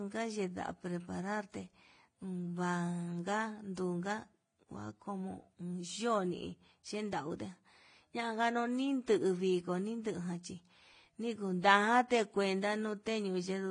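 The speech appears to have been encoded by one low-bitrate lossy codec and then re-encoded by another, likely transcoding between lossy codecs, with a Vorbis stage near 30 kbit/s followed by AAC-LC at a similar rate. Throughout, nothing is heard above 9.8 kHz, so the top end sounds dull. The second encoder spends its few bits on the first one's artefacts and adds its own, so the different artefacts are heard together.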